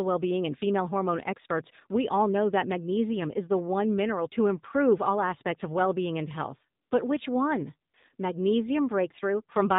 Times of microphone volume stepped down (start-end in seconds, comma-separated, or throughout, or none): none